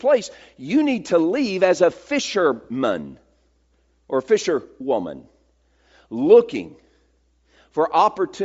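Throughout the speech, the upper spectrum sounds noise-filled: the voice carries a grainy, breathy hiss instead of a clean bright edge. This points to Bluetooth LC3 compression, likely at a low rate near 32 kbps, where the zeroed upper bands are filled with synthetic noise. That noise fill sets it apart from a plain low-pass, which would sound dull rather than grainy.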